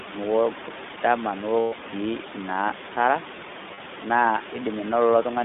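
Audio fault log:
Throughout: iLBC codec. The speech is held to a narrow telephone band of about 200 Hz to 3.6 kHz. Each 20 ms frame is coded on its own at 15.2 kbps, which gives a plainly audible rough, synthetic edge. On a spectrogram the energy stops sharply at the band edges, with nothing above 3.6 kHz.
1.60–1.74 s and 3.74–3.79 s: lost iLBC frames. Packets went missing, 120 ms and then 40 ms. For each gap the decoder repeated the last pitch cycle blended with noise, so it sounds like a brief held, buzzy vowel. The voice is right again almost at once after. On a spectrogram this shows as smeared, evenly repeating harmonics, and the longer gap fades in level on the waveform. Room noise sits about 16 dB under the speech.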